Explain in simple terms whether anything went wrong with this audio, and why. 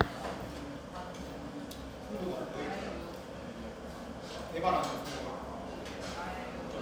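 Nothing stood out as wrong when listening to this recording; it sounded as it should throughout.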